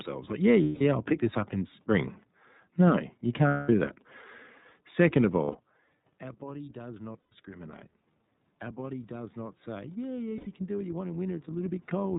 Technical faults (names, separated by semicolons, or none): iLBC codec; lost iLBC frames; automatic gain rising